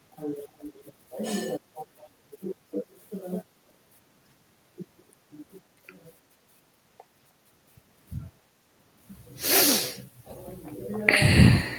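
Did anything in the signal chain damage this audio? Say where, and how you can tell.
Yes, there's an echo leak in the call processing, from 0.58 to 0.84 s: a faint copy of the speech trailing it by 355 ms, roughly 20 dB down. Likely the far end's loudspeaker fed its microphone and the echo canceller let that residue through.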